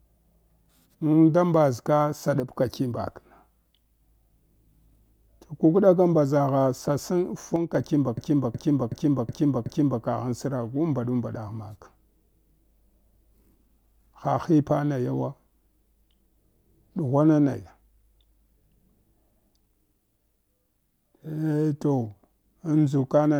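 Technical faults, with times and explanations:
2.40–2.53 s and 7.56–7.75 s, one channel drops out: the speech level falls abruptly by about 6 dB for these brief spans, then recovers. That drop is what a mono sum gives when one stereo channel is likely lost, halving the shared content.
8.17–10.03 s, system hang loop: a 0.37 s piece of speech repeats exactly five times at 2.69 Hz, a slow mechanical stutter. The computer froze while the hardware kept replaying its ring buffer, which fits a 16384-sample buffer. Essentially no audio is skipped.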